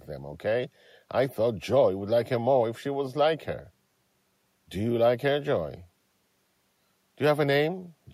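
No technical faults are audible.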